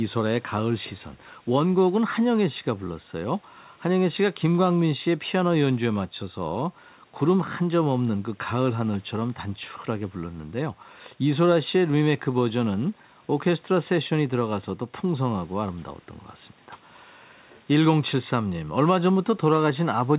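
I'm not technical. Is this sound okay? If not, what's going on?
Yes, nothing in this speech recording stood out as a problem when listening to it.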